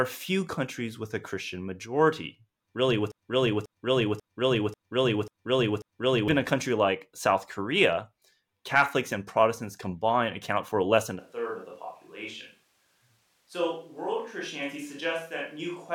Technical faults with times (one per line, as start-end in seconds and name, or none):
3.12-6.28 broken-record loop
11.19-15.94 switch to a distant microphone